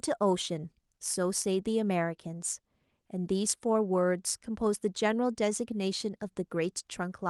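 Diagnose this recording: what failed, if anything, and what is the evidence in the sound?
No fault detected in this recording.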